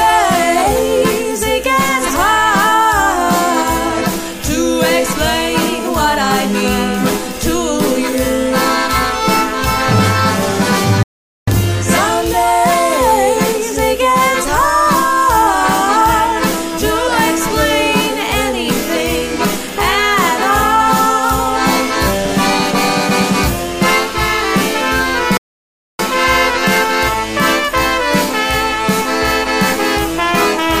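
At 11.03 s the sound cuts off abruptly and stays silent until 11.48 s, about 0.44 s. At 25.37 s it happens again for about 0.62 s, resuming at 25.99 s. These are playback stalls, most likely the player running out of buffered data or having its thread blocked. What separates them from ordinary dropouts is the length: the silence lasts hundreds of milliseconds rather than a few.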